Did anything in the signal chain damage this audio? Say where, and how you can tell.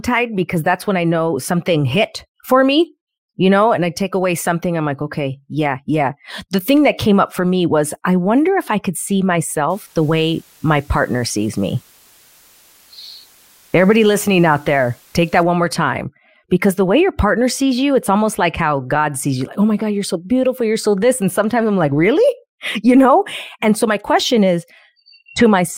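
Yes. The damage happened at a sample-format conversion stage. From 9.70 s to 15.43 s, just after "if I could see" and ending before "one more time because", a steady, even hiss sits under the speech. It is about 30 dB below the signal, with no added distortion. This is low bit depth with dither. The speech was reduced to about 8 bits. Dither turned the rounding error into constant white noise instead of harsh distortion.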